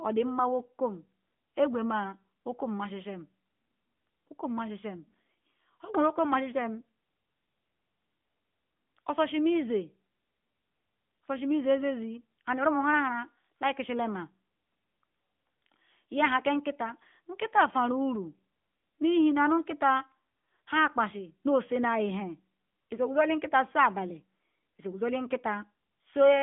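AMR narrowband mobile codec damage runs from start to finish of the speech. The audio has been squeezed into a 2G/3G-style phone channel: a vocal-tract model excited by a handful of pulses per 5 ms subframe rebuilds the voice, and the line passes only about 150 Hz to 3.5 kHz. The result sounds thin and boxy, with a plainly audible buzzy, synthetic edge that fits a mid-rate mode of around 10 kbps.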